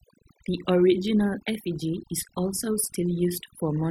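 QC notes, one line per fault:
Throughout, overdone noise removal: the noise reduction was pushed too hard, so individual frequency bands near the noise estimate are pulled down or cut entirely, taking quiet speech detail with them. This leaves a lowered background flecked with twinkling specks. Those isolated chirping specks distinguish it from plain low-pass filtering or gating.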